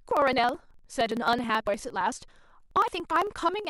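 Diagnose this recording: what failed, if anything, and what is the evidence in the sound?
Periodic USB or driver dropouts at the driver stage: from 0.11 to 3.65 s, ticks every 0.054 s as roughly 10 ms of speech is skipped each time, about seventy losses.

Abrupt jumps in the speech at 0.74, 1.67 and 2.88 s, skipping about 200, 200 and 100 ms, likely dropped buffers (overrun) in the driver's buffer handling.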